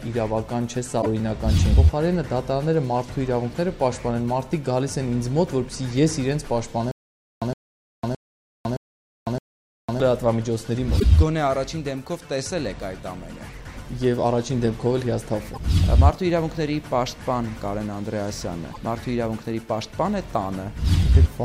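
Right at the start, from 0.98 to 1.07 s, there's a quick glitch. That's damaged data in a compressed stream. Some bytes in the file got mangled, so the decoder couldn't read those frames, lost its place, and had to hunt for the next clean frame header before carrying on. The same kind of glitch turns up again at 10.96 to 11.04 s, 15.51 to 15.59 s and 18.69 to 18.77 s, each one about 80 ms long.

From 6.91 to 10.0 s you get a stutter with silent gaps. A short 115 ms burst plays, then about 502 ms of dead digital silence follows, and the pattern repeats five times on a steady 617 ms cycle. It's likely a stalled player or stream that kept replaying its last fragment on each retry and then running dry. Whatever should have played during that stretch is gone.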